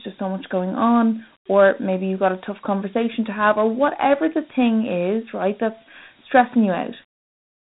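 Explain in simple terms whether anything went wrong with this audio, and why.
The speech was squeezed through Dialogic VOX ADPCM, a coarse phone-system compression, so throughout it sounds gritty and hissy, with nothing above 3.9 kHz.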